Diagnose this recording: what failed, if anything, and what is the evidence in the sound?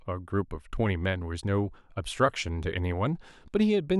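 Nothing stood out on listening to this speech recording, and no stage of the chain gives any audible sign of having failed.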